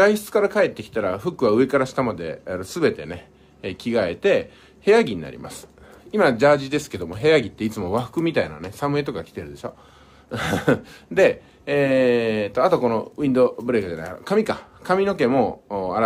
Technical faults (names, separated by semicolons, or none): none